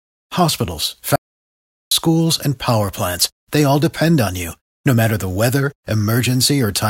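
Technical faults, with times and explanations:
1.16–1.91 s, audio dropout to silence: the speech cuts off abruptly and resumes about 0.75 s later, with silence in between and no room tone. The input signal was likely lost while the recorder kept writing silence, so that stretch of speech is gone.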